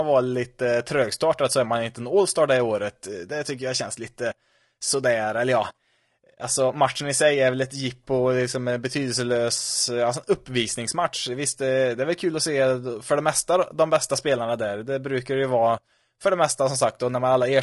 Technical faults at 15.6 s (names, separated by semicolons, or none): low-delay AAC compression